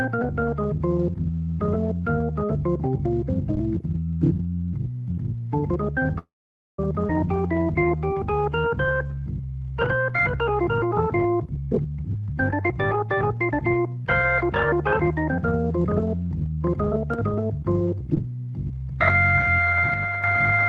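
From 6.18 to 6.79 s there is a call audio freeze, most likely because packets were held up and the jitter buffer ran dry. The receiver extends the last sound into a fading tail that gives way to about 0.51 s of silence, and then the audio picks up where it stopped. Nothing is lost, but a gap of roughly 0.6 s has been inserted.

At 7.07 to 7.10 s comes a skip ahead. A stretch of audio already queued behind later material was discarded, so playback leaps forward with almost no join. Roughly 0.3 s of content is missing, and the two sides butt straight together.

From 7.46 to 9.72 s the jitter buffer slow-down repeats pitch periods and bits of pauses to rebuild its reserve, adding 342 ms. The audio plays at 85% speed at unchanged pitch, so sounds are stretched out.

From 11.40 to 13.68 s the jitter buffer speed-up does the opposite, cutting short pieces of a pitch period or a few to shed excess delay. 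About 0.7 s is removed, and the passage runs at 126% speed at the same pitch, sounding clearly hurried.

Twice, one channel drops out, likely the loss of one side of an identical stereo pair. This happens briefly at 17.14 to 17.19 s and again at 19.94 to 20.24 s. Each time the mono level falls abruptly by about 6 dB while the character of the sound stays the same.

Throughout, the call path's Opus coding is audible as its usual coding noise and a top end stopping near 12 kHz, which fits a bitrate around 20 kbps.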